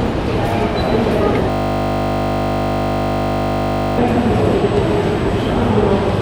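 At 1.5 s the audio locks into a system hang loop that lasts until 3.98 s. The host or driver stopped supplying new data while the sound hardware kept replaying the same section of its ring buffer. A 20 ms slice repeats exactly, over a hundred times, and at 50 Hz this fuses into a steady, flat buzz rather than a stutter. The loop length points to a small buffer. When playback resumes, about three seconds of the original sound are missing.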